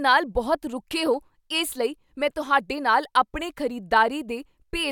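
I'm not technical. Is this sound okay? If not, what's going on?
Yes, it's fine: nothing in this recording sounds broken or out of place, so there's nothing here to worry about.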